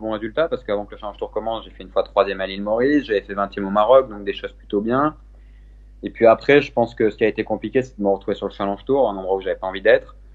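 From start to end, mains hum sits under the sound: a steady 50 Hz tone with its low harmonics, roughly 25 dB below the signal. The power line is coupling into the audio path, most plausibly through a ground loop or a nearby transformer.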